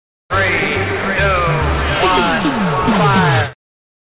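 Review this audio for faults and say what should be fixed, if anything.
Aliasing runs through the entire clip. High-frequency content was folded back around 4 kHz rather than removed, which fits a sample-rate drop to 8 kHz without a low-pass filter. The folded components sit roughly 15 dB below the signal and sound gritty and metallic. To prevent this, apply an anti-aliasing low-pass filter below 4 kHz before downsampling.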